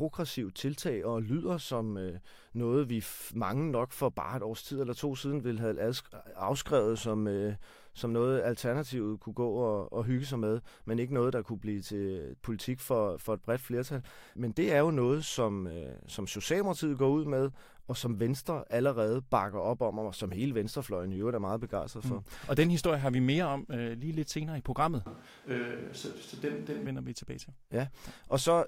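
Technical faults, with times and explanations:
25.06–26.86 s, switch to a distant microphone: after "lidt senere i programmet" the speech turns suddenly roomy and hollow, with thinner bass and room noise about 25 dB below it, at much the same level, until "vender vi tilbage til"; the close microphone likely dropped out, leaving a farther one.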